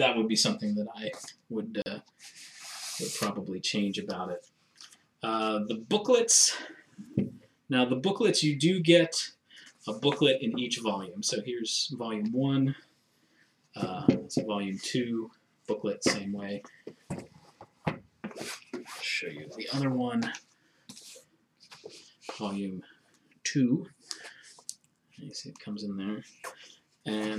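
At 1.82 to 1.86 s (40 ms) and 7.14 s, blocks of digital silence cut the audio abruptly, leaving a short hole and a tick. Each appears as a flat waveform gap with vertical spectrogram click lines.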